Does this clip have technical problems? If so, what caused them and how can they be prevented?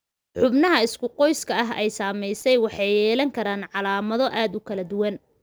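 Yes, there's a short loose connector crackle from 2.34 to 2.42 s, a worn contact chopping the speech into scratchy pops. Reseat or replace that cable before recording.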